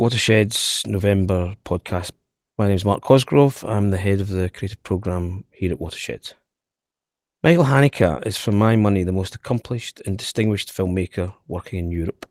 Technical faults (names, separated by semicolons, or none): none